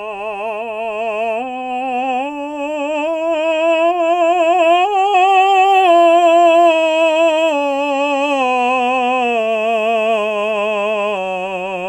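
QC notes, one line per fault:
No faults heard anywhere in the music.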